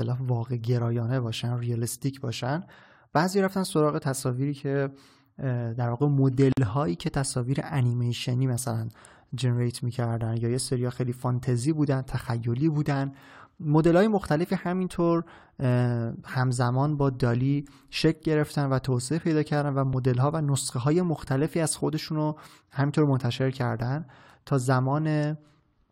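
At 6.52 s the speech drops into a 49 ms gap with smeared edges, then resumes: a gap at a join of separately encoded pieces, their padding left untrimmed.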